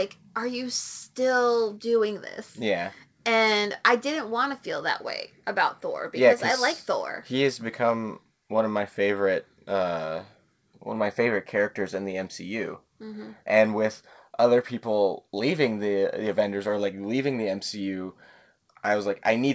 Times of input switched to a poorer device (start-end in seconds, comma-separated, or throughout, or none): none